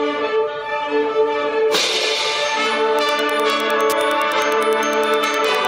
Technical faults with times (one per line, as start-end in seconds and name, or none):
2.94-5.68 Wi-Fi interference